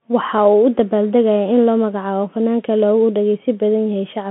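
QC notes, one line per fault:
Throughout: Bluetooth CVSD headset codec. The band is narrowed to telephone width, roughly 150 Hz to 3.4 kHz, with nothing above 3.8 kHz. The damage is plainly audible and fits CVSD at 64 kbps. Each sample is coded as a single up-or-down step whose size adapts, so fast, loud high-frequency movement outruns the step and distorts. S sounds come out scratchy, and a granular hiss sits under the speech.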